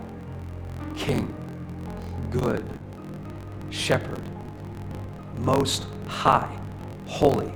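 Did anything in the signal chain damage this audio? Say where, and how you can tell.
Yes. A steady buzz at about 43 Hz runs through the whole clip, and the sound moves about 1.12 times too fast while keeping its normal pitch. This is a block size mismatch (truncated) at the driver or buffer stage: each block's tail is discarded, which fits a 1024-sample read.

At 2.39 s and again at 2.77 s, a sound hangs on too long, by 20 ms and then 30 ms. These are short stalls from a late packet on the network path. The jitter buffer emptied and held the last sound until the packet arrived. Nothing was lost.

From 4.08 to 5.14 s the audio drags to about 95% speed at unchanged pitch, with drawn-out sounds. This is a jitter buffer slow-down: the receiver repeated small pieces of the signal, adding 63 ms to rebuild its reserve.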